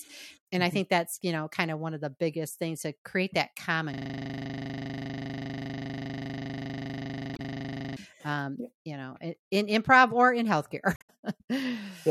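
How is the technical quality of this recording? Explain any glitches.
The recording has real problems: a long freeze-style loop and two short codec glitches.

The system hang loop runs from about 3.94 to 7.97 s, right after "to create that common". The machine or driver stalled while the sound hardware kept replaying the same 40 ms chunk of its buffer, roughly a hundred times over. At a 25 Hz repeat rate that comes across as a rough, rattling buzz, a frozen sliver of sound for about four seconds instead of anything new.

The damaged data in a compressed stream shows up twice, at 7.33 to 7.40 s and at 10.93 to 11.10 s. The first falls inside the loop and the second comes later on its own. In both spots some of the compressed data was wrong, so the decoder couldn't read those frames properly and had to hunt for the next valid frame header. Each is a brief glitch, around 70 ms and 160 ms long respectively.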